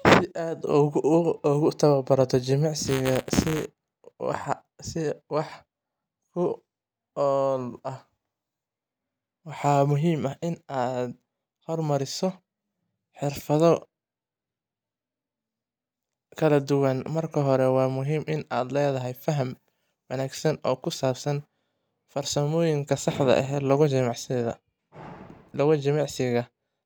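From 2.85 to 3.65 s the speech takes on a robotic rattle. This is buffer tearing. The program filling the ring buffer and the hardware reading it have drifted out of step, so their positions cross inside each period. A small sliver of every buffer, a few percent, still holds audio from around 10 ms earlier. Hard joins sit on both sides of it. These repeat at 200 Hz, which fits a 5 ms buffer period, and give the buzz.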